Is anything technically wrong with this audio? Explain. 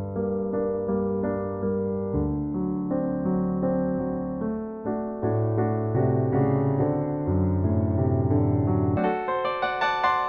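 Yes. From 8.97 s to the end, the audio is read two samples at a time (double speed). Sample pairs are taken as single frames, so playback runs 2x fast and a full octave higher. Unlike a time-stretch fault, pitch and tempo jump together.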